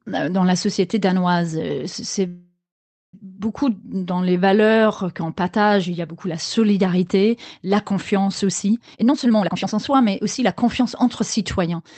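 At 2.27 s the speech hits a call audio freeze until 3.15 s, likely packets stalling and the jitter buffer running dry: a fading fill, then about 0.55 s of silence, and it resumes where it left off. From 8.86 s to 11.81 s there's a jitter buffer speed-up, with pitch periods trimmed so the speech runs about 129% fast at normal pitch, roughly a second cut.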